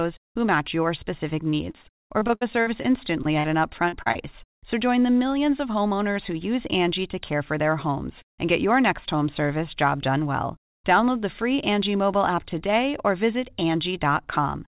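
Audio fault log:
1.50–3.47 s, repeated packet loss (robotic sound): about a dozen dropouts, the longest 60 ms, are each patched by extending the preceding sound, so roughly a fifth of this stretch is synthetic fill. The fill gives choppy speech with fragments missing.
3.89 s, 4.02 s, 4.12 s, short concealed packet loss: three brief holes of about 40, 40 and 20 ms are filled by continuing the last waveform, then crossfading back into real audio. Each one is a quick smear or wobble, and a short consonant may drop out.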